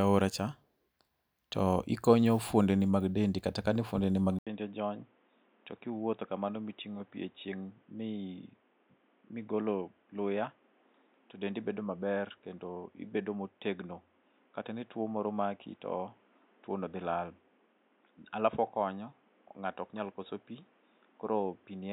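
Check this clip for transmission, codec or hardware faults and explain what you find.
One fault, an input switched to a poorer device. From 4.39 s, right after "kata kane fuondeni mag", the speech goes silent for 80 ms, then returns quieter by roughly 10 dB and boxy, with nothing above 3.8 kHz and a new background noise around 35 dB down. This lasts to the end. The likely cause is the system moving to a narrower-band microphone or headset profile. A codec bandwidth drop would not bring the gap, level step and different noise floor.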